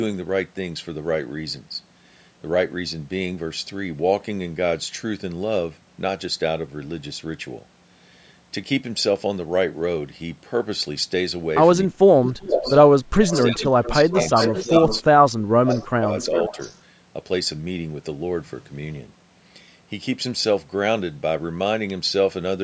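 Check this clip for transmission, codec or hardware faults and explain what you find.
Two call-path faults appear in the middle of the clip, with audio passing through call microphone processing that leaves nothing above 8 kHz.

Speech suppressed in double talk occurs at 11.87–12.68 s, 13.27–14.15 s and 14.63–16.58 s. The speech dips by up to about 30 dB, likely because the echo canceller attenuated everything during overlapping talk.

Echo leak occurs at 12.24–12.8 s, 13.28–15.01 s, 15.72–15.87 s and 16.19–16.76 s. A copy of the speech returns roughly 380 ms late, about 5 to 25 dB down, likely from incomplete loudspeaker echo cancellation.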